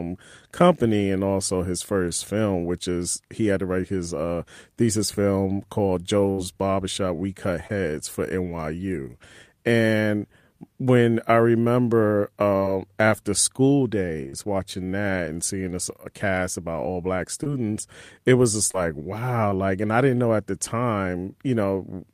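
Burst of packet loss at 6.31–6.40 s: about 60 ms of audio never arrived, so the receiver stretched the last sound into a fading tail before jumping ahead. Short concealed packet loss follows at 7.68–7.71 s, 12.57–12.63 s (between "when I remember" and "after school"), 14.29–14.47 s (after "after school", before "that and seeing a"), 17.44–17.47 s (after "cast about all black"), 18.71–18.75 s and 19.49–19.53 s. Each time, about 20–40 ms went missing and was patched by continuing the preceding sound, heard as a brief smear or wobble.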